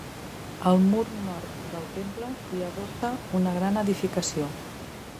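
Input switched to a poorer device, 1.04 to 3.03 s: the speech abruptly turns boxy and dull, with a narrower band, drops roughly 10 dB in level, and picks up a faint new noise floor well below the voice, all with no gap at the switch. The likely cause is the recording moving to a lower-grade input, such as a headset's call profile, before returning to the fuller original sound, whose room noise sits about 15 dB under the speech.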